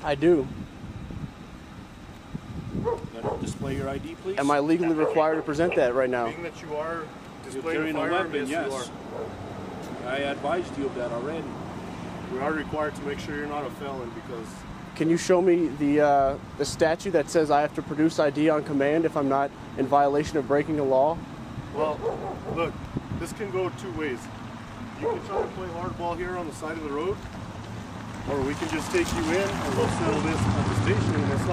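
No technical faults can be heard anywhere in this audio. There is nothing that calls for a time mark or an account of something going wrong.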